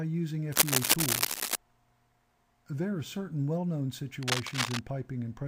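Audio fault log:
0.52–1.56 s and 4.23–4.79 s, cable scratch noise: dense, uneven scratching bursts, first louder than the sound, then about equal; likely a worn cable or connector moved, its contact resistance fluctuating.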